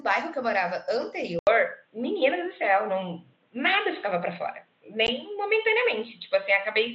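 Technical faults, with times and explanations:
1.39–6.94 s, input switched to a poorer device: After a gap of about 80 ms, the sound turns dull and boxy. Nothing remains above 4 kHz. The level shifts by about 5 dB, and a new noise floor sits roughly 45 dB down. This likely reflects a change of microphone.
5.07 s, unconcealed Bluetooth headset packet loss: A hole of about 15 ms cuts into the speech with abrupt edges. That length fits roughly two lost packets on the mSBC link. Nothing fills the gap, so the sound simply drops out and resumes.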